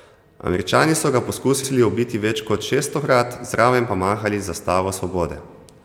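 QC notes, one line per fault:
1.63–1.70 s, repeated frames: right after "so ga", a 70 ms block of speech plays a second time before "ubiti več kot šeststokrat", which fits a run of about three compressed frames sent twice. Unlike a dropout, nothing is lost; the sound stutters and the clip grows by 70 ms.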